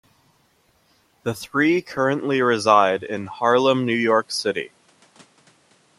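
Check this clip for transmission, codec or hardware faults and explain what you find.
One fault is present. Input switched to a poorer device, from 1.97 s to the end: the recording likely moved to another microphone with a narrower band. Nothing remains above 11.4 kHz, so the speech turns duller, with faint new background noise far beneath it, no gap, and no real level change.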